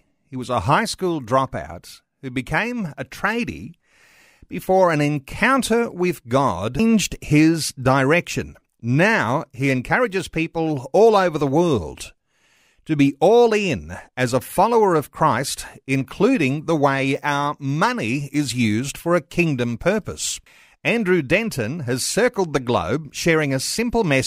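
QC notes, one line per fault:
6.79 s, CD skip: after "before an encounter with" a tick and a mute of about 4 ms, then playback resumes at "his direction" from a different turn of the disc spiral.
20.46 s, CD skip: after "kingdom purpose" a brief mute of about 5 ms and a tick as the laser jumps tracks, so the speech continues from another point.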